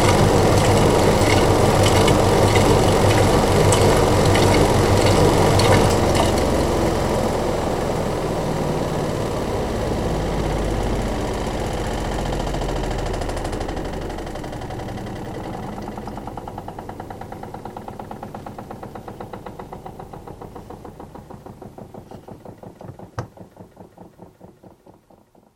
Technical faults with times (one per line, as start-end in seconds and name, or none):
1.19-1.21 repeated buffer
15.25 repeated buffer